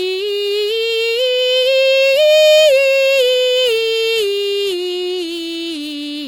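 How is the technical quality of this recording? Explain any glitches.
The music carries a clear codec fault from start to finish: generation loss, audible throughout the clip. The texture is swirly and hollow, with a watery smear on sustained tones and blunted attacks, and the top end stops near 19.3 kHz. The damage is heavier than a single pass at a moderate MP3 rate would leave. That points to the audio likely having been decoded and re-encoded around ten times. Each pass requantises on a shifted frame grid, so noise and spectral holes accumulate.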